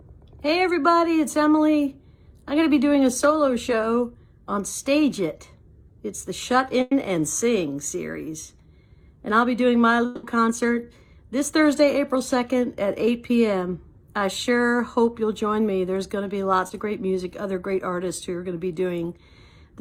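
At 6.81 to 6.93 s there is a burst of packet loss. About 100 ms of audio never arrived, so the receiver kept extending the last sound and faded it down across the gap, and the audio then resumes with that stretch missing. It is heard as a brief held buzz or hiss that sinks away. On a spectrogram, the last spectral pattern is smeared flat for 100 ms and fades, then the audio jumps ahead.

From 10.05 to 10.25 s, the sound is replaced by a continuation of the last audio lasting about 180 ms, fading as it goes. It never drops to true silence before the audio returns further on, without the lost part. The likely cause is a long network dropout. On the waveform the envelope decays smoothly over 180 ms. The spectrogram shows repeated, blurred frames dimming toward the resumption point.

At 16.67 to 16.71 s, short concealed packet loss fills a hole of about 20 ms. The receiver carries the preceding sound forward for that instant and blends it back into the real audio, leaving a tiny smear or wobble. 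The spectrogram shows a thin vertical band where detail briefly softens. The waveform shows a short, slightly smoothed patch that blends back in.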